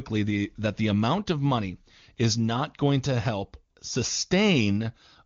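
The speech clip has no technical faults. It has passed through the AMR wideband (HD Voice) codec at 23.85 kbit/s, which shows as a band that stops at about 7 kHz, with the region above 6.4 kHz carried as shaped noise and any coding damage faint at most.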